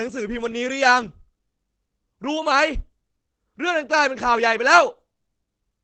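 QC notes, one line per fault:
Throughout, Opus compression: nothing above 8.7 kHz, the speech sounds heavily muffled and hoarse, likely a low-rate speech mode fitting about 12 kbps.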